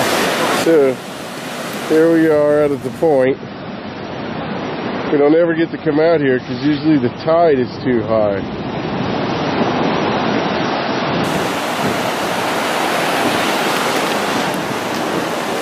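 From 3.24 s to 11.24 s the sound drops to an adaptive stream at a lower bitrate. Nothing survives above 5.9 kHz and artefacts thicken, which points to a fall from roughly 128 to 24 kbit/s MP3. Unlike a dropout, quality switches abruptly both ways with no gap.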